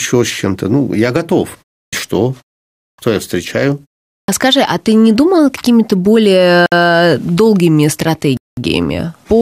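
Clipped start after a pause occurs three times in this speech, at 1.86 s, 2.91 s and 4.21 s. Each time, speech resumes out of a short gap (about 0.31 s, 0.57 s and 0.43 s) with its opening missing, and roughly 66 ms, 74 ms and 74 ms are lost. The output device drops into a low-power state during the gap and needs that long to wake and lock again, so the first sounds vanish and the speech starts abruptly. A Bluetooth stall cuts the audio to silence at 6.66 s for about 59 ms and at 8.37 s for about 201 ms. The likely cause is radio interference delaying packets until the headphones' buffer ran empty, so playback halted and resumed once the resent data arrived.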